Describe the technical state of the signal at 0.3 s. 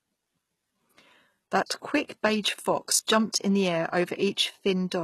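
Likely HE-AAC compression at a rate that fits about 16 kbps, running throughout: treble above the coded band is rebuilt from copied lower bands, cut off at 12.3 kHz, leaving sibilants gritty and lispy.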